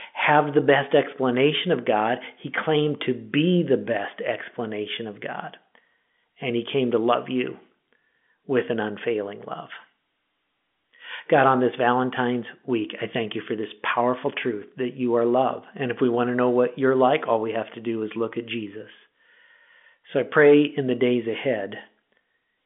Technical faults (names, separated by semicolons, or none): none